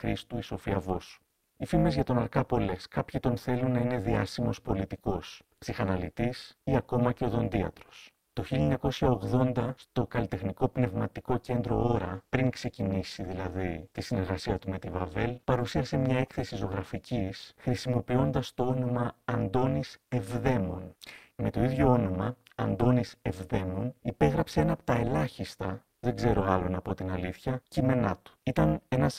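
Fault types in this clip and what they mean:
Overlap-add ripple: The speech was chopped into windowed frames and stitched back with an overlap that doesn't sum evenly, so the level dips once per frame. The swings are deep, about 60 dB, at around 400 Hz, giving a harsh, metallic buzz with extra tones around each note through the whole clip.
Call bitrate drop: From 11.46 to 18.33 s the encoder gets starved of bits, and the speech goes coarse, watery and duller up top. That fits a fall from roughly 40 to 16 kbps, bottoming out for about 5.8 s before quality comes back.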